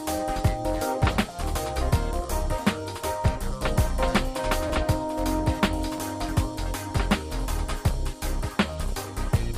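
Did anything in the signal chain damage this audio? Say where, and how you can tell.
Yes, at the driver or buffer stage. Brief clicks with a buzzy edge sound at 4.68–4.70 s, 5.98 s and 8.23 s. Each is a repeated buffer: new audio arrived late, so a tiny chunk, consistent with a 10 ms buffer, replayed with hard joins, twice over at 4.68 s.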